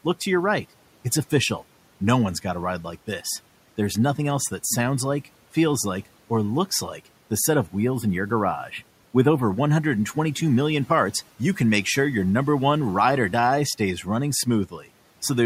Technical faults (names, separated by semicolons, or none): channel delay (comb filtering); speech cut by the noise suppressor